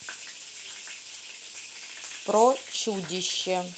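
No technical faults can be heard in this speech clip. It has passed through a working WebRTC call path, and the top end stops at about 8 kHz, which fits the Opus codec at wideband settings.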